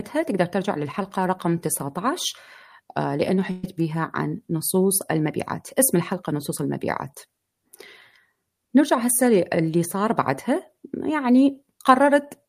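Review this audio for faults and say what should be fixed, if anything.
A burst of packet loss at 3.51–3.65 s: for about 117 ms the last sound is repeated and faded, and about 120 ms of speech is skipped. The spectrogram shows smeared horizontal bands, then an abrupt restart. Adding forward error correction or a deeper jitter buffer would prevent it.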